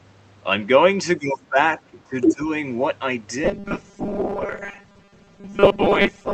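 Speech suppressed in double talk occurs from 1.17 to 1.58 s and again from 1.81 to 2.48 s. The talker's level sinks by as much as about 20 dB, in dips and dropouts. The likely cause is an echo canceller that, with both sides talking, could not tell local speech from loudspeaker echo and turned both down.

The other side's voice leaks through from 2.22 to 2.34 s, inside the second suppressed stretch. A brief foreign voice surfaces, about 5 dB above the talker's own speech. The likely cause is echo cancellation that failed to remove the loudspeaker playback from the microphone signal.

Robotic sound from repeated short buffers runs from 3.44 s to the end. The speech turns into a rigid, metallic 200 Hz buzz that still roughly tracks the words, with about half the audio made of repeats. It likely comes from late-arriving audio being padded by looping the last fragment, and the 200 Hz pitch fits a 5 ms repeated buffer.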